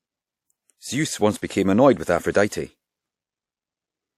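A transform codec spread its quantisation noise across whole blocks, so sharp attacks falling late in a block dragged that noise into the quiet just before them. The result is pre-echo, heard three times in this speech: 1.37 to 1.42 s (52 ms), 2.32 to 2.35 s (31 ms), and 2.48 to 2.52 s (38 ms). Each attack arrives behind a brief hiss and sounds softened and smeared rather than crisp.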